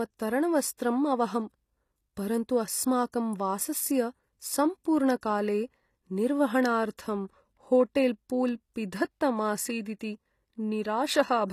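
Speech with plainly audible coding damage: the treble is bright but synthetic, sibilants turn gritty and lispy, and nothing reaches above 15 kHz. That points to a low bitrate of around 24 kbps, likely HE-AAC compression, which rebuilds the upper band from copied lower bands rather than just dulling it like a plain low-pass. Pre-echo appears at 3.12, 5.21, 6.97 and 9.99 s: a brief hiss smears 11 to 18 ms ahead of sharp onsets. Because it comes before the attack rather than trailing it, it is quantisation noise spread across a transform block, not reverb or ringing.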